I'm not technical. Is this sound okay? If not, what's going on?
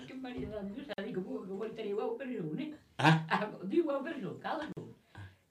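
No. There are two short silences, at 0.93 s (about 47 ms) and 4.72 s (about 44 ms). Each is a gap at a join of encoded pieces, where separately compressed sections were stuck together with leftover silent padding. Unlike a dropout, nothing is missing: the sound resumes exactly where it paused.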